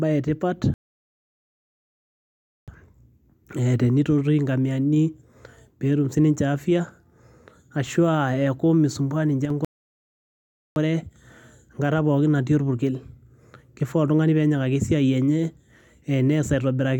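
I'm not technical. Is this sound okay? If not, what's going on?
No. The speech has two playback stalls, from 0.74 to 2.68 s and from 9.65 to 10.76 s, where it goes silent for about 1.9 s and 1.1 s and then resumes. The player likely ran out of data or was briefly held up.

Just before the second stall, from 9.45 to 9.50 s, there is a one channel drop-out: the sound suddenly turns noticeably quieter for a split second. This is likely one of the two stereo channels cutting out, leaving only half the signal.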